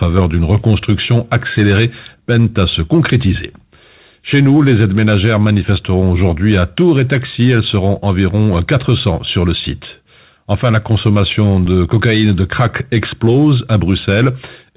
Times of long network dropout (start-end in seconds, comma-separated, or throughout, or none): none